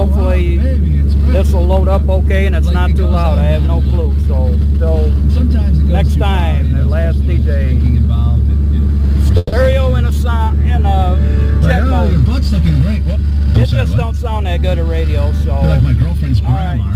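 At 9.37 s a call audio freeze begins, likely from packets held up in transit so the jitter buffer ran empty. For 150 ms the receiver extends the last sound as a decaying buzz or hiss, then resumes at 9.54 s exactly where it stopped, inserting a gap while losing nothing.

From 13.16 to 14.58 s comes a jitter buffer speed-up. The buffer had built up excess delay, so the receiver trimmed short pitch-period pieces, about 150 ms in all. The sound plays at 109% speed, audibly hurried, with pitch unchanged.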